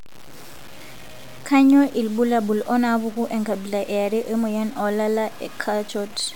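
This speech clip likely suffered low bit depth without dither, with samples truncated to a coarse grid that fits about 6 bits. Throughout, the rounding error tracks the voice as grainy, shifting distortion only about 25 dB below the signal, and the quietest passages sputter or drop out.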